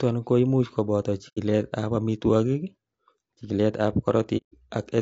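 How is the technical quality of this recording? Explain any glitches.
The recording is compromised: the speech carries plainly audible compression damage throughout, and it drops out twice.

Low-delay AAC compression: The speech sounds rough and grainy, likely from AAC-ELD at a bitrate around 32 kbps. Short frames resolve pitch harmonics poorly, so a spectrogram shows smeared harmonics with noise filling the gaps and a thin, synthetic-looking top band.

AAC frame loss with muting: From 1.28 to 1.38 s and from 4.37 to 4.53 s, the sound fades into silence for 90 ms and then 150 ms. Lost frames were decoded as zero spectrum, and the overlapping windows taper the edges, so each gap is a soft-edged hole. On the waveform it looks like a smoothly tapered flat stretch, and on a spectrogram like a clean vertical blank band.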